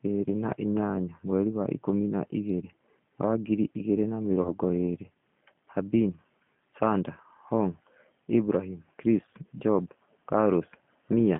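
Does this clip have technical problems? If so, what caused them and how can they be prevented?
Yes. The speech runs through a G.729 codec for its whole length, and there is one burst of VoIP packet loss concealed by the speech codec.

The G.729 coding damage is plainly audible from start to finish. The sound is confined to roughly 150 Hz to 3.4 kHz and has a slightly rough, synthetic texture, which fits G.729A at 8 kbit/s. At that rate the decoder rebuilds each 10 ms frame from a vocal-tract filter, a pitch predictor and a few pulses instead of the real waveform. That synthetic grain is what separates it from a plain telephone band-limit, which would sound muffled but still natural. Using a wideband codec such as G.722 or Opus, or a higher bitrate, would prevent it.

The packet loss concealment falls between 4.42 and 4.50 s. About 30 ms of audio is missing, which fits a single lost packet. 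Instead of a silent gap or a click, as a plain dropout would give, the decoder keeps extending its last pitch and filter at falling gain. This produces a brief, fading buzzy or noisy smear. Because each frame builds on the one before, the sound stays weakened for a little while after packets resume, which is why the disturbance lasts longer than the 30 ms loss. A steadier network path, an adequate jitter buffer and forward error correction or redundancy would prevent it.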